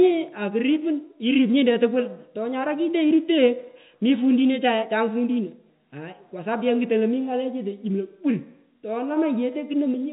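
No technical faults can be heard in this speech.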